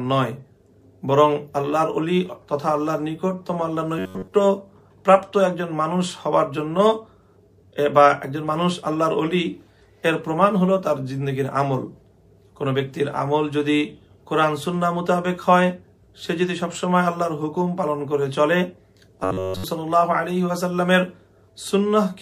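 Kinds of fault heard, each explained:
Robotic sound from repeated short buffers, 3.99 to 4.35 s and 19.20 to 19.64 s: the sound turns into a rigid metallic buzz near 94 Hz, likely because audio arrived late and a segment of about 11 ms was looped, replacing most of the real signal.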